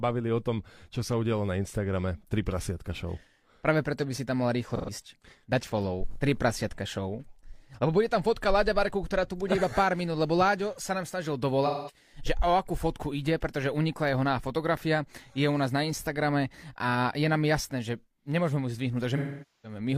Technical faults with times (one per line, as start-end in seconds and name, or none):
4.75-4.90 AAC frame loss with concealment
11.65-11.96 AAC frame loss with concealment
19.17-19.79 AAC frame loss with concealment